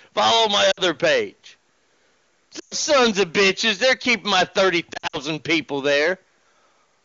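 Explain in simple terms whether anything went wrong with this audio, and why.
Two things went wrong.

Hard clipping: the speech was pushed far louder than one stage of the chain could carry, so roughly one sample in ten had its peak sliced flat. That adds a harsh fuzz and crackle to every loud sound throughout the clip.

Lost AMR speech frames: radio errors corrupted chunks of the phone call's HD Voice stream, so the decoder filled the gaps by stretching and fading the last good sound. You hear brief drop-outs to near silence at 0.71 to 0.81 s, 2.59 to 2.74 s, and 4.93 to 5.17 s, where the losses are scattered.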